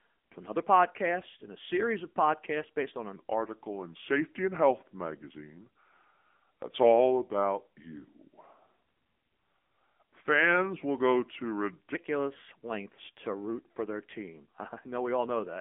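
Speech heard throughout through an AMR narrowband mobile codec at 7.95 kbps: nothing above 3.7 kHz survives, the line band sits roughly 200 Hz to 3.5 kHz, and the buzzy, synthetic texture of the vocal-tract model sets it apart from plain low-pass filtering. From 3.16 to 11.95 s, right after "of podcasts based on", a section at the wrong speed plays at 0.836 times normal, about three semitones lower. Because pitch and tempo fall together rather than separately, this is likely playback against a mismatched clock, not a pitch shift.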